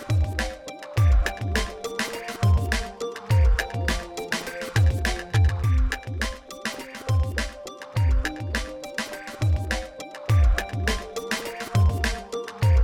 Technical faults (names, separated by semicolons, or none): none